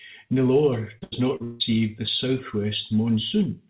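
Repeated packet loss (robotic sound) hits this speech from 0.98 to 1.62 s: four gaps, the longest 160 ms, are patched by extending the preceding sound, leaving roughly half that stretch choppy and robotic. The narrowband sound, with nothing above 4 kHz, fits a G.711 call codec.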